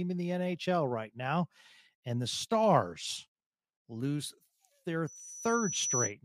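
Speech clip with loudspeaker feedback squeal from 5.07 to 6.13 s, after "lose their": a 5.9 kHz tone swells over about a second to roughly 5 dB above the voice, showing as a bright horizontal spectrogram line.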